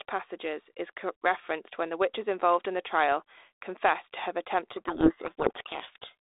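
From 4.72 s to 6.15 s the speech sinks under harsh, grinding distortion. This is a codec payload misread: the G.726 code words are read in the wrong bit order, so the decoder rebuilds wrong sample differences from frames that still look valid.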